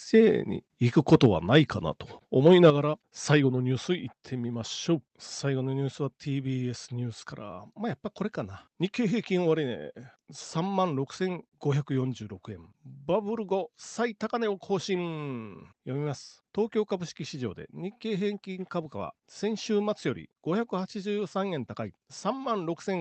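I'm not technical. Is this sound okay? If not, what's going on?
No. Microphone overload can be heard from 1.13 to 1.26 seconds and again from 2.46 to 2.67 seconds. The loudest moments of speech turn harsh and crackly there, most likely because the microphone was set too sensitive. When the sound gets louder than the recording can hold, the tops of those peaks are simply chopped off, and that flattening is what produces the rough, gritty edge.

A microphone volume step-down follows each of those moments, at 1.26 and 2.70 seconds. The voice and the background both drop in loudness all at once, and the second drop is clearly bigger than the first. The likely cause is the calling software noticing the distortion and turning the microphone down by itself in a single jump, rather than easing it gradually. That is why each drop lands right after a crackly peak.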